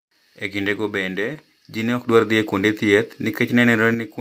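At 1.33 to 1.37 s, between "kindego bende" and "ji ne ok", there is a short concealed packet loss. About 20 ms of the speech arrived too late to decode. The receiver extended the preceding sound to cover the gap and then merged back, leaving a brief smear.

A sudden gain jump follows at 2.09 s, right after "bende ji ne ok". The speech and the background noise rise together by about 6 dB in a single step, with no fade. The raised level holds until 3.94 s. The likely cause is a digital gain setting applied without a ramp.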